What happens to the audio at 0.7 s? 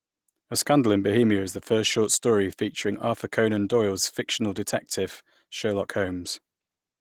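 At 0.7 s, as throughout, the speech carries Opus voice compression. Coarsely coded hybrid excitation, consistent with roughly 16 kbps, makes it plainly hoarse and slightly robotic.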